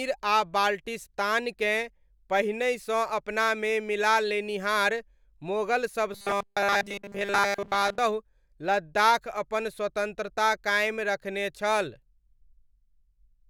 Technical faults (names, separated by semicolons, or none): robotic sound from repeated short buffers